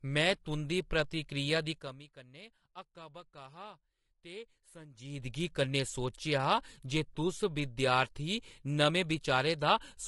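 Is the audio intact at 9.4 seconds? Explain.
No. Low-delay AAC compression runs through the whole clip, so at 9.4 seconds the speech is plainly degraded: rough, grainy voicing with a hiss-like fill between the pitch harmonics and a dulled, synthetic-sounding top band. The likely cause is a low-delay codec such as AAC-ELD, whose very short frames cannot separate closely spaced harmonics well; the damage fits a bitrate around 32 kbps, too few bits to code those frames cleanly.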